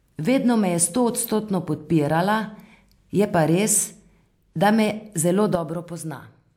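At 5.55 s a sudden gain jump drops the speech and background together by about 8 dB until the end, with no ramp like a fade, likely from an unramped gain setting.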